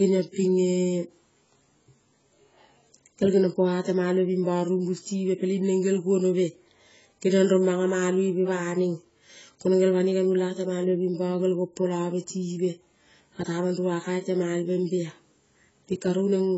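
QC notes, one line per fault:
Throughout: AAC compression. Nothing reaches above 7.7 kHz, so the speech sounds dull and boxed-in, with sibilants that fizz and warble rather than hiss cleanly. Heavy damage fits a low-bitrate AAC-LC encode, around 16 kbps, as the likely cause. That leaves too few bits to carry the full spectrum. The encoder drops the upper band entirely and coarsely quantises what remains, leaving the voice smeared.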